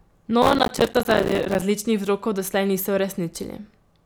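Processor overload crackle affects this speech recording from 0.42 to 1.62 s. The processor repeatedly misses buffer deadlines, which fits buffers of around 5 ms, and each miss leaves a hard-edged silent gap that together sound like gritty crackle.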